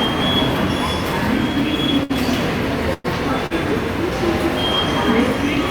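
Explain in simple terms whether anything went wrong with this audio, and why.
Twice the sound snags for a moment. These are a short stall from a late packet, at 2.03 to 2.11 s and again at 3.46 to 3.52 s. A piece of audio arrived late, so the last sound was stretched to cover the wait, about 60 ms and 40 ms. Then playback picked up where it stopped.

At 2.93 to 3.06 s there is a call audio freeze. The sound turns into a brief fading buzz or hiss for about a tenth of a second, without going silent. Then it resumes where it left off. The likely cause is packets held up on the network.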